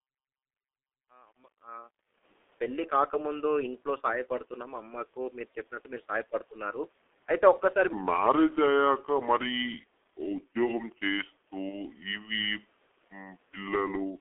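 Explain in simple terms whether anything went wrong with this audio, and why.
Yes, several things went wrong. The whole recording passed through the G.723.1 codec, an early internet-phone system that squeezes audio very hard and keeps only roughly 250 Hz to 3.5 kHz. The speech comes out muffled and hoarse, with smeared consonants throughout.

During the opening fade-in, from 0.00 to 2.24 s, there is truncation distortion on a fade. The volume stage worked with too few levels of detail (which fits a 10-bit stage) and no smoothing noise, so the quiet start sounds gritty, worst until about 1.82 s.

From 7.93 s to the end, a section is at the wrong speed. It plays at about 0.74 times its proper speed, likely from playback on the wrong clock, so the speech turns slow and drags, and pitch falls by around five semitones.

From 11.69 to 11.79 s there is VoIP packet loss concealed by the speech codec. 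One 30 ms chunk of audio went missing, and the decoder guessed by repeating what came before. That produces a brief stretched, fading smear, and the speech stays weak just afterwards.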